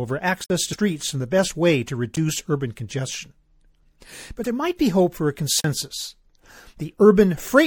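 At 0.44 s the speech drops into a block of digital silence lasting 60 ms, to 0.50 s. The sound cuts out and comes straight back with no fade, leaving a dead hole. At 0.72 s a different kind of damage appears, lasting about one 26.1 ms frame, to 0.75 s. The sound lurches forward. The likely cause is a broken MP3 bit reservoir: frames were lost, and the next frame reached back for borrowed data that belonged to another frame. The same jump recurs at 4.43 to 4.46 s. Another block of digital silence falls at 2.16 s. It is only 11.72 ms long, so it is heard as a tick or dip rather than as silence. A third block of silence runs from 5.60 to 5.64 s, a 40 ms hole. What separates the two kinds is their content. Each silent block is silence with abrupt edges, while each reservoir fault decodes data from the wrong frame and skips the sound ahead.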